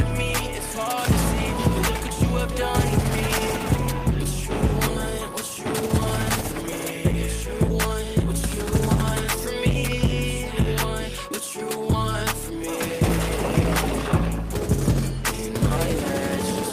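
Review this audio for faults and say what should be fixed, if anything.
Nothing here needs fixing; no faults were found.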